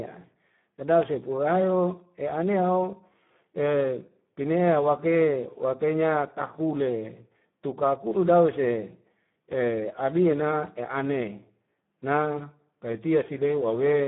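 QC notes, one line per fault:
Throughout, Speex codec: the speech sounds noisy and hoarse, confined to a narrow band of about 150 Hz to 3.5 kHz with nothing above 3.8 kHz. Heavy CELP coding at a low setting, consistent with around 8 kbps, starves the excitation signal.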